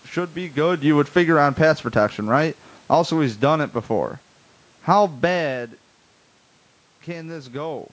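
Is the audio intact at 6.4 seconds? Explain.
Yes, the audio is intact at 6.4 seconds, with no fault at that moment.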